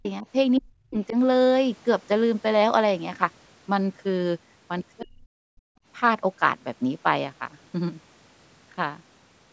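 Speech suppressed in double talk appears from 0.00 to 0.26 s and again from 0.58 to 1.16 s. The speech dips sharply, by roughly 40 dB at its deepest, in short bursts totalling about a tenth of a second in the first stretch and under half a second in the second. This is likely an echo canceller hearing both ends active at once. It cannot tell the near talker from loudspeaker echo, so it turns everything down and leaves the speech chopped and hollow.

The other side's voice leaking through follows briefly from 4.97 to 5.05 s. A faint second voice, about 20 dB below the main speech, slips into the microphone for a fraction of a second. Its likely cause is echo from the device's loudspeaker that the canceller failed to remove completely, so a scrap of the far end rides under the talker.

Speech suppressed in double talk returns right on top of that leak, from 5.01 to 5.28 s, and again from 5.53 to 5.77 s. 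Each time the speech drops out by as much as roughly 40 dB, for a few tenths of a second in total per stretch. Here the canceller is likely clamping down after detecting the far-end voice, cutting the near talker into pieces.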